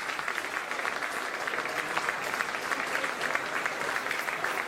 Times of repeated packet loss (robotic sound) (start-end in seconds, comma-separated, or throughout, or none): none